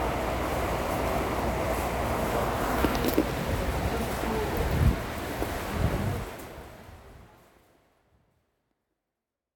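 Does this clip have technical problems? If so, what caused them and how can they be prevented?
No, nothing stood out on listening, and the smooth fade-out that begins at around 6 s is a deliberate, gradual drop in level rather than a problem.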